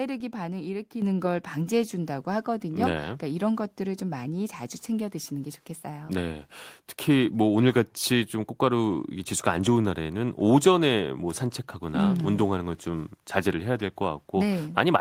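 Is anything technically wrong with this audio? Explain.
Yes, there's one fault. At about 1.02 s the microphone volume steps up: the whole signal, speech and background alike, jumps by about 7 dB in one go. That's what happens when the call software decides the mic is too quiet and raises the device's input volume in a single step rather than easing it up. Because the voice and the room noise rise together at the same instant, it sounds like the whole recording suddenly got louder.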